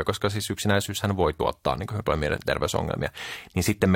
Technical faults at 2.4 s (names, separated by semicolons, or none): overlap between stream segments